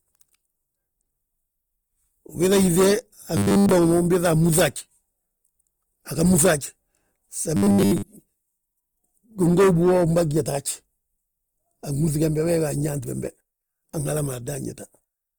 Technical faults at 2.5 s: Opus compression

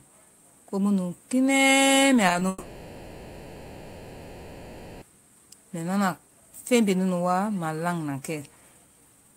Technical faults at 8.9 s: none

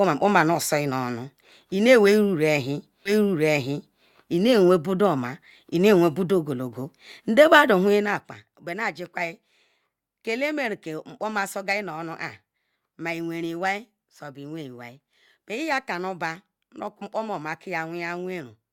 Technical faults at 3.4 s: stream segment repeated

